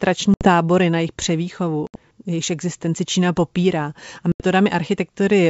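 Packet loss on an ADPCM call at 0.34–0.48 s, 1.87–1.95 s and 4.32–4.43 s: silent holes of 70, 70 and 80 ms, after which the speech resumes briefly disturbed while the decoder's predictor and step size re-align with the sender's.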